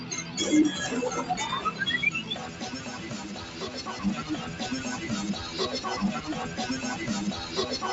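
You can hear a speech-style noise suppressor left running on material it wasn't built for. It treats held tones, ambience and tails as noise and pulls them down, so the level pumps and thins out by around 10 dB from moment to moment while attacks mostly punch through. In two spots the suppressor bites harder and you get the sound cut by the noise suppressor: from 0.00 to 0.37 s and again from 2.45 to 3.81 s, sustained parts sink by up to about 5 dB and decays get clipped short. There's also clock drift between sender and receiver. The sending side's clock runs a few percent fast, so the jitter buffer keeps overfilling and the receiver has to drop little slivers to catch up. From 4.07 to 7.29 s that shows up as repeated timing corrections. The edits are all in the same direction, run at about 101% speed and come unevenly spaced, so you get faint hiccups and a slightly jittery pace rather than anything obvious. 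Everything sits within an 8 kHz band from the call path.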